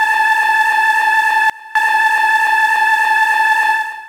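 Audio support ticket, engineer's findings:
Sudden gain jump, 1.50 to 1.75 s. Level steps down about 21 dB instantly, then restores at 1.75 s. Background noise drops with the signal, so not a gate or dropout. Step edges with no ramp, so not a fade. Likely an unramped gain setting.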